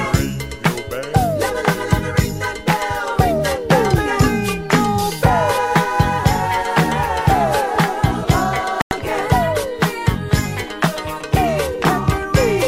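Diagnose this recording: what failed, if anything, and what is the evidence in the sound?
Digital broadcast dropout at the reception stage: the sound mutes from 8.82 to 8.92 s, consistent with three lost frames, as the receiver silenced corrupted frames.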